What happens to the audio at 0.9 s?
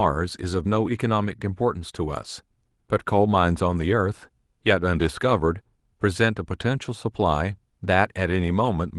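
Nothing goes wrong at 0.9 s; the speech plays through that moment intact, with no dropout, click or distortion.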